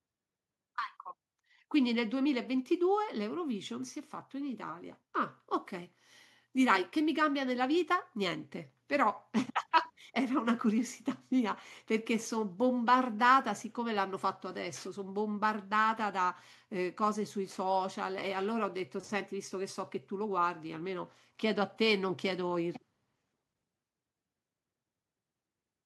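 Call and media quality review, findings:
No audible faults found.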